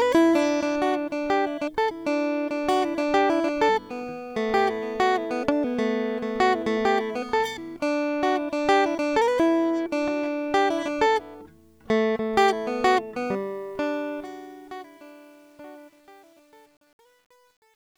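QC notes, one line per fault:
13.27–17.97 s, truncation distortion on a fade: the music's fade-out, otherwise a smooth slide toward silence, is processed without dither at a coarse word length, consistent with about 9 bits. From 14.3 s onward the quiet tail turns gritty and steppy.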